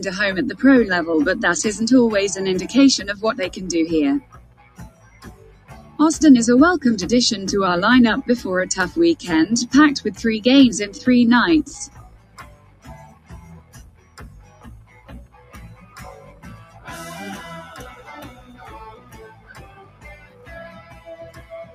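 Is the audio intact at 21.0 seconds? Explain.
No. A noise suppressor applied to music or sounds runs through the whole clip. It treats steady tones, ambience and decay as noise and turns them down. Attacks pass while sustained parts sink, so the level swings by roughly 20 dB.

A sound cut by the noise suppressor falls at 20.71 to 21.07 s, so 21.0 s sits inside it. The suppressor judged this sustained or fading material to be noise and pulled it down by up to about 8 dB. It thins and sinks.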